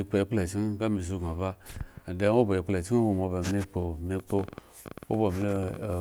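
From 4.20 s to 5.94 s a train of clicks runs over the speech, roughly thirty of them at an average of 13.8 per second but with uneven spacing. Each click has much the same sharp shape and peaks a few decibels above the speech, so they read as a ragged ticking that carries through the gaps as well. The likely cause is electrical interference or a faulty connection or power supply injecting repeated pulses.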